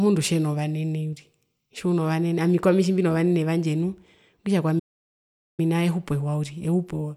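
At 4.79 s the speech cuts off mid-flow and the output goes silent until 5.60 s, a playback stall of about 791 ms before the audio resumes. The likely cause is the player running out of buffered data, or its thread being blocked, so nothing reached the output. On a waveform the trace drops abruptly to a flat line for that span. A spectrogram shows a clean vertical gap with no energy at any frequency, bounded by sharp edges on both sides.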